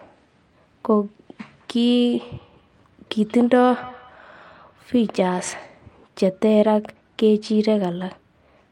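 Speech, with feedback echo between two devices from 2.12 to 5.79 s. The sound returns roughly every fifth of a second, peaking about 22 dB below the speech, because a second device replays the call into the microphone, whose echo canceller removes only its own playback.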